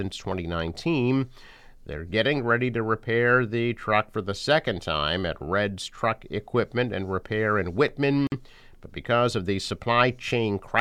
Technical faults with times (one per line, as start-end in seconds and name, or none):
8.27-8.32 gap at a join of encoded pieces